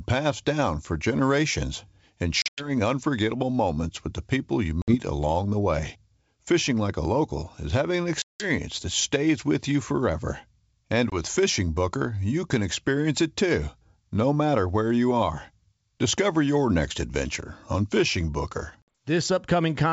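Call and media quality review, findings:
Packet loss on an ADPCM call, G.722 wideband path. Hard silent holes at 2.42–2.70 s (140 ms, broken up, longest 100 ms), 4.82–4.96 s, 8.22–8.48 s (180 ms), 11.10–11.20 s, 18.82–18.88 s. Decoder predictor and step size desync. Brief slight distortion after each hole.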